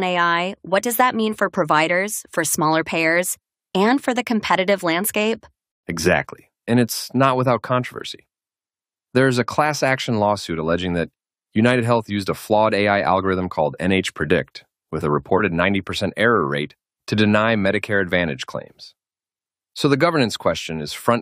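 No technical faults can be heard anywhere in this recording.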